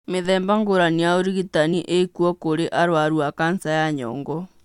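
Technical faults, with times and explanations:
1.72 to 1.74 s, damaged data in a compressed stream: there's a quick glitch in the speech right here, only about 20 ms long. A bit of the compressed data at this point got mangled, so the decoder couldn't make sense of those frames. It loses its footing and hunts for the next valid frame header to lock back on. That brief scramble is what pops out as the glitch before things settle again.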